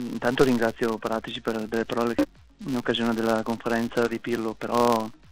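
A filter restarted on every block runs throughout the clip: the filter loses its memory at each block boundary, so every 5 ms block opens with a small transient, producing a 200 Hz buzz that rises and falls with the sound's level.

Damaged data in a compressed stream appears from 2.19 to 2.25 s: corrupted frames throw the decoder out of sync while it hunts for the next valid header, leaving a brief glitch.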